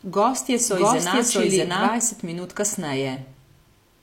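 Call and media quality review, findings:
Doubled audio track, 0 to 1.92 s, already present at clip start. Full-band copy of the speech trails by about 0.7 s at near-equal level. Dry, no decay. Ends abruptly at 1.92 s. Likely a second, slower capture path or a misaligned edit.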